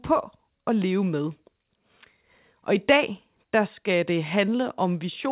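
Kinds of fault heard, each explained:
No faults heard here.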